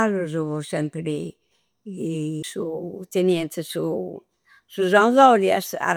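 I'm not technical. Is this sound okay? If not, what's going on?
No. At about 2.43 s the speech gives a tiny tick and a split-second gap, then carries on from a slightly different spot. That's a CD skip: a bump or flaw made the player's laser jump to another turn of the disc.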